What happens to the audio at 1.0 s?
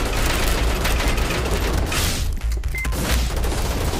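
Sharp, violent cracks break out on the loudest peaks. This is integer overflow, running throughout: about 1 dB of overdrive wraps a tiny fraction of samples to the opposite sign instead of limiting them.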